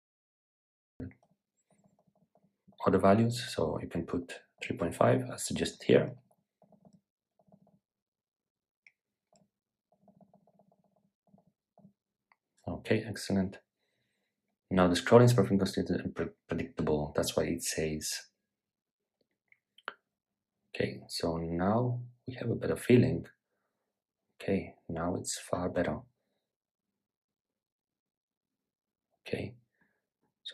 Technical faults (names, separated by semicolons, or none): cut-off start